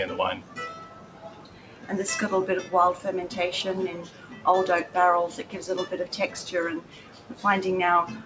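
A noise suppressor built for speech was left running on this sound. It treats held tones and tails as noise. Level swings by around 10 dB, so attacks come through while sustained parts sink, giving a pumping, thinned texture throughout.

The first sound cut by the noise suppressor falls at 0.41 to 0.57 s, dropping by about 7 dB. A longer cut runs from 0.76 to 1.9 s, dipping by about 8 dB. Then 4.03 to 4.45 s loses about 7 dB, and 6.81 to 7.44 s loses about 8 dB. Each time, steady material fades and decays end early. Across all of it, nothing sounds above 8 kHz, which fits a wideband call codec such as G.722 at 64 kbps.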